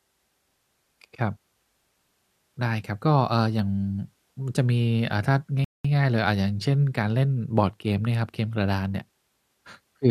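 At 5.64 s the speech drops to silence for about 0.2 s and then picks up at 5.85 s exactly where it left off, with nothing skipped. This is a rebuffering stall: the player exhausted its downloaded audio and paused until more data arrived, adding 200 ms of dead air.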